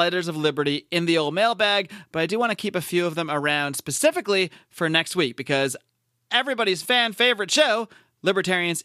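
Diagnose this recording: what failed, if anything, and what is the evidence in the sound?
Nothing in this speech recording points to a failure at any stage of the chain. No stage from capture through to playback leaves an audible trace of trouble, so there is no evidence to report.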